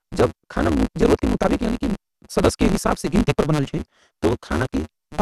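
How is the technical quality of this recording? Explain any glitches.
The technical quality is poor, with two faults present throughout.

A block size mismatch (truncated) runs from start to end. One stage writes longer blocks than the next reads, so the tail of every block is discarded. The regular cuts put a steady buzz at 150 Hz under the speech, and the speech runs 1.6 times too fast while keeping roughly its normal pitch, since the remaining audio is not resampled. The figures fit 512-sample blocks being written.

The second fault is also continuous. The sound is dull, with nothing above 12.1 kHz, and it carries a granular, gurgling roughness where upper content seems to flicker in and out. The likely cause is MP2 compression at a starved bitrate, consistent with roughly 80 kbps. Layer II divides the spectrum into 32 sub-bands and shares out bits among them. With too few bits, the top bands are switched off and the rest are coarsely quantised, giving plainly audible codec damage.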